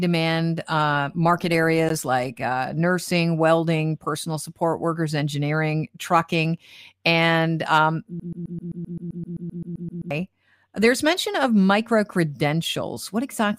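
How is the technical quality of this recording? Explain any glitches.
There's one real problem here, a broken-record loop in the speech. From about 8.20 s to 10.11 s, a tiny 130 ms slice of sound repeats back to back, 15 times in a row, giving a stuttering, machine-gun effect instead of speech. That's most likely the player, encoder or stream stalling and resending the last fragment it had buffered, so whatever should have played in those two seconds is simply gone.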